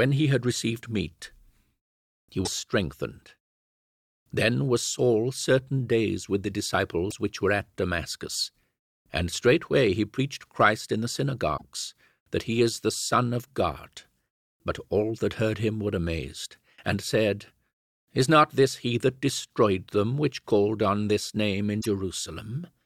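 At 2.44 to 2.48 s the speech breaks up briefly. This is damaged data in a compressed stream. Some frames arrive corrupted, the decoder misreads them and loses sync until the next valid frame header. The same fault returns at 7.07 to 7.12 s, after "certain days with the" and before "which were at". It comes again at 11.53 to 11.62 s, after "in the", and at 21.77 to 21.86 s, after "called on this name".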